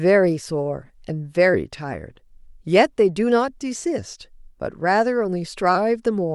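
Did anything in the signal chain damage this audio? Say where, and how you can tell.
No, nothing along the chain from capture to playback has left an audible mark on this speech.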